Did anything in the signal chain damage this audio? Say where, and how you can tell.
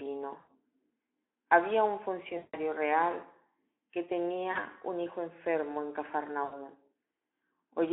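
Yes. In the network stage, the Speex decoder was missing packets and filled the gaps with concealment (VoIP packet loss concealed by the speech codec) at 0.39–0.51 s, 2.37–2.58 s, just before "real que", 4.51–4.64 s, right after "real que" and before "un hijo enfermo en", and 6.43–6.55 s, right after "un hijo enfermo en". The decoder stretches its last pitch and filter into a fading buzzy smear through the narrow telephone band. The losses were about 80, 160, 40 and 80 ms.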